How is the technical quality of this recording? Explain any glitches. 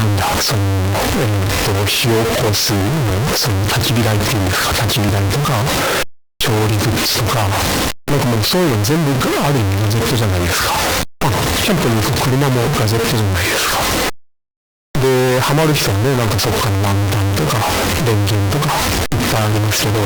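The quality is poor: a stuck-bit fault runs through the whole recording, and three brief skips interrupt it.

Stuck bit, throughout the clip: the speech carries added noise or distortion, and the pauses are filled with noise rather than falling silent. The likely cause is a single data bit stuck at a fixed value in the converter or its wiring. About half the samples are then shifted by that bit's weight, which grinds against the waveform. Near zero the error flips with the signal's sign, so the gaps hiss.

Overlap between stream segments, at 5.09, 11.05 and 13.04 s: each is a small click or tiny skip where the waveform jumps. About 5 ms disappears at the first and about 15 ms at each of the other two. The spacing fits 2-second segments whose time stamps overlap. The player trims the supposed duplicate, but that audio was never doubled, so real sound is lost at the join.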